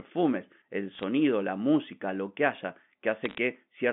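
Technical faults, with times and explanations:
0.95–1.03 s and 3.24–3.38 s, bit errors on a digital phone line: Bursts of sharp ticks and crackle sit over the speech, first just before "la música lo que", then right after "música lo que haya". Fewer than one bit in a hundred is flipped on the G.711 line. Each flip corrupts a single sample. Flips in the high bits, or in the sign of a loud sample, throw that sample far off, which produces a click.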